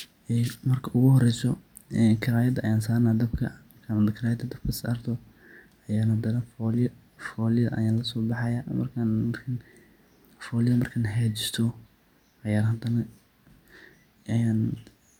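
No technical faults are audible anywhere in the recording.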